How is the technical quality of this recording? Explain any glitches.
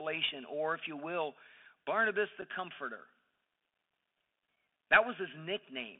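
The recording has narrowband Bluetooth headset quality throughout, with one brief dropout in the speech.

For the whole clip the speech has passed through the Bluetooth CVSD headset codec, at 64 kbps, with the line band running from about 200 Hz to 3.5 kHz. CVSD sends one bit per sample to say whether the waveform steps up or down, and the step size adapts. Loud high-frequency sounds outrun that step and distort, s sounds turn scratchy, and a granular hiss sits under the speech. The codec damage is plainly audible. The combination of a hard telephone-band ceiling with that grainy, slope-limited distortion is what sets it apart from ordinary band-limiting or a low-bitrate perceptual codec, which would smear or warble instead.

At 2.42 s there is unconcealed Bluetooth headset packet loss. About one voice packet between headset and phone went missing, leaving a 7.5 ms hole that was filled with silence or an idle pattern rather than a patched-over guess. 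The speech cuts out abruptly and then returns quieter for a moment as the CVSD step size rebuilds. That momentary dip in level after the gap distinguishes it from a simple edit or a digital dropout.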